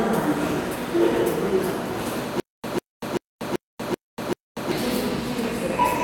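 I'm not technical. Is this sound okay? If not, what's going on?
No, there's a stutter with silent gaps from about 2.40 to 4.71 s. A short 0.15-second snippet repeats six times, each followed by about 0.24 s of dead silence. The playback likely stalled and kept replaying its last bit, so the real audio there is lost.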